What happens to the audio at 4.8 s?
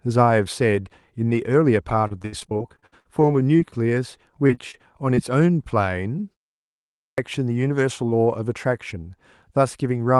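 Just before that point, from 4.71 to 4.75 s, a short concealed packet loss occurs: about 20 ms of audio never arrived, so the receiver extended the preceding sound, leaving a brief smear.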